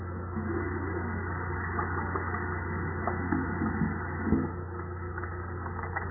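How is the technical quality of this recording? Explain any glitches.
Poor, because heavy damage runs through the whole recording. From start to finish the sound is dull and watery, with nothing above 2 kHz, and the likely cause is MP3 compression starved of bits, which fits a bitrate near 8 kbps.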